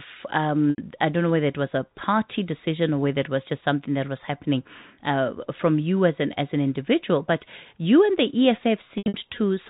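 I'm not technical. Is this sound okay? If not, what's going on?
No, there are two brief glitches from packet loss with pitch repetition. At 0.71 to 0.78 s, just before "I don't know whether", bits of the call went missing and the phone filled the gap by repeating the last sliver of voice, so it sounds briefly held and buzzy. It happens again, choppier, at 8.98 to 9.14 s. The telephone-style narrow sound comes from ordinary phone coding.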